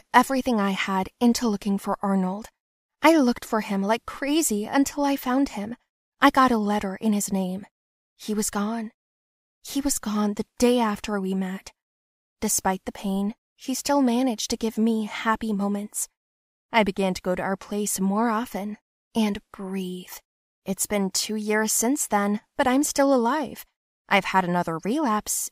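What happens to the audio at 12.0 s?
At 12.0 s the speech continues without any fault; the audio is intact at that moment.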